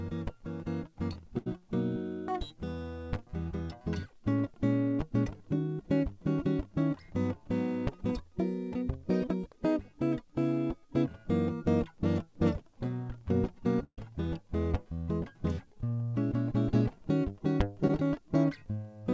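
At 1.38 to 1.48 s there is a burst of packet loss. About 80 ms of the music never arrived. The receiver extended the last sound for roughly 78 ms, fading it down as the gap went on. Playback then resumes further along, with that stretch skipped. The second burst, at 13.84 to 13.99 s, is longer. About 140 ms is missing, and the concealment runs around 136 ms, fading to roughly 60 ms of outright silence within it.

At 17.87 to 17.91 s there is a short concealed packet loss. About 20 ms was lost, and the decoder synthesised roughly 17 ms of continuation from the preceding sound before blending back into the real signal. It registers as a momentary smear or wobble in the music. Throughout, the call path's band limit is present, with nothing above 8 kHz. That fits a wideband codec such as G.722 at 64 kbps.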